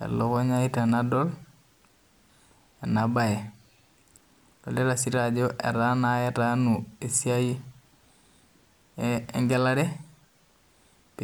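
No technical faults are audible anywhere in this recording.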